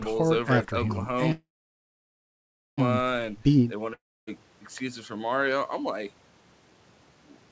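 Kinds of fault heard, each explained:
Call audio freeze: At 1.32 s the sound stalls, a brief fading buzz or hiss gives way to about 1.3 s of silence, and at 2.80 s it resumes right where it stopped, so nothing is lost but everything after runs about 1.46 s late. Likely packets held up while the jitter buffer ran dry.
Long network dropout: From 3.94 to 4.29 s the last sound smears into a short fading buzz or hiss, then goes quiet for about 0.28 s. When audio returns, roughly 0.34 s has simply vanished, which is likely a stretch of packets that never arrived at all.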